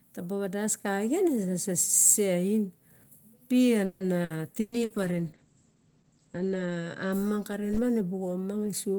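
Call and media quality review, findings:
Call and media quality review, findings:

Repeated packet loss (robotic sound), 3.85–4.93 s: choppy speech with four holes, longest 150 ms. Concealment stretches prior audio across about 390 ms, roughly a third of the span, and 240 ms is lost outright. Likely network-side loss or late arrival.

Call bitrate drop, 4.73–7.18 s: speech turns rough and muffled, high end cut from 20 kHz to 8 kHz, worst stretch 2.07 s. Points to the bandwidth estimate falling and the Opus encoder stepping down from about 32 to 12 kbps.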